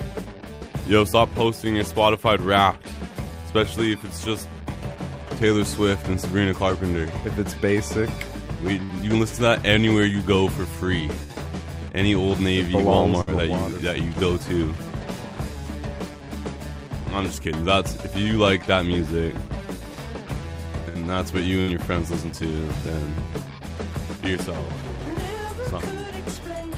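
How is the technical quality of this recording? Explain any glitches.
Six bursts of packet loss break the recording, at 0.55, 8.83, 11.23, 13.21, 20.89 and 21.61 s. Each time, about 60 ms of packets were lost or arrived too late. The receiver stretched and faded the preceding sound across the hole, heard as a brief buzz or hiss, then jumped ahead past the lost audio.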